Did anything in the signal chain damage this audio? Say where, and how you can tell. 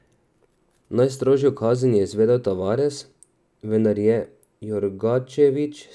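No, nothing along the chain from capture through to playback left an audible mark on this speech recording.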